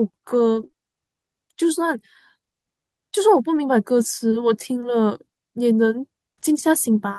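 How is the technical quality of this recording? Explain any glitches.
The recording has network glitches, all early or brief.

Lost packet rebuilt from error correction, 0.55–0.65 s and 3.55–3.57 s: low-bitrate backup copies replaced 60 ms, consistent with three 20 ms packets, then 20 ms, so these spots sound rougher and noisier instead of silent.

Short concealed packet loss, 0.67–0.71 s and 0.71–0.75 s: the receiver extrapolated 13 ms and 19 ms of missing 20 ms stretches from preceding speech, heard as a brief smear or wobble.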